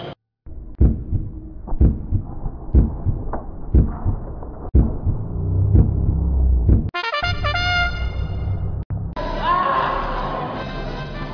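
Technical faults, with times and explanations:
No technical faults can be heard anywhere in the audio; the signal stays steady and intact throughout.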